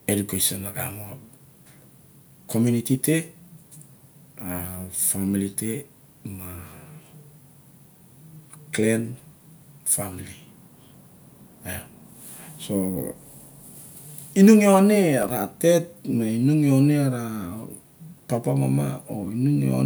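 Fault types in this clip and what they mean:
Loose connector crackle: a worn or dirty contact opening and closing erratically, chopping the speech into a short, irregular scratchy burst from 15.23 to 15.30 s. On a waveform it shows as jagged dropouts and spikes, and on a spectrogram as ragged broadband vertical streaks.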